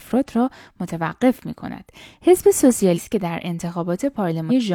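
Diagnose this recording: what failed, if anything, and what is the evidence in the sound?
Compressed frames skipped at 2.93 to 3.00 s and 4.46 to 4.52 s, a codec decoding fault. The speech jumps forward, losing roughly 100 ms and then 200 ms, multiples of a 46.4 ms frame.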